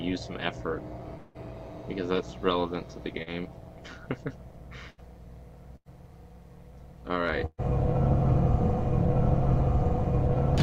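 Overlap-add ripple runs through the whole audio: the level swells and dips by about 6 dB at around 150 Hz. Frames that short reassemble with uneven gain, giving a metallic buzz with extra tones, seen as sidebands about 150 Hz apart on a spectrogram and a rippled waveform envelope. From 1.17 to 1.37 s the sound gives way to a continued buzz or hiss lasting about 171 ms, with no true silence, and about 180 ms of audio never returns. The likely cause is a long network dropout, where the receiver extends the last sound until real audio resumes further on, visible as a smeared, repeating stretch in the spectrogram. A short concealed packet loss at 3.23 to 3.28 s fills a 40 ms hole with 37 ms of extrapolated sound, heard as a brief wobble and seen as a blurred patch where fine detail stops. Bursts of packet loss follow at 4.90 to 5.00 s (about 75 ms filled, 80 ms lost), 5.76 to 5.88 s (99 ms filled, 100 ms lost) and 7.46 to 7.60 s (126 ms filled, 120 ms lost, ending in 40 ms of silence). 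In each burst the receiver continues and fades the last sound, which shows as tapering envelopes and jumps where audio resumes.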